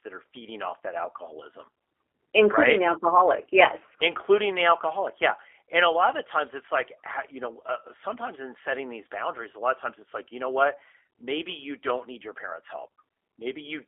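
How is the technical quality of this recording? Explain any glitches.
The speech passed through a low-bitrate telephone codec, and its damage is plainly audible for the whole clip. G.729 codec, throughout: the sound fits G.729A at about 8 kbit/s, confined to a 300 Hz to 3.4 kHz line band. Each 10 ms frame is rebuilt from a vocal tract filter, pitch prediction and a few pulses, so the speech sounds muffled, slightly rough and synthetic.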